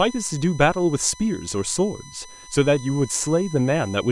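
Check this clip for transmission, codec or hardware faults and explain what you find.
There's one fault, running the whole way through: USB whine, a steady 1 kHz-based tone loudest at its 6 kHz harmonic, sitting roughly 20 dB under the speech. The USB bus's 1 ms frame current is leaking in through power or ground.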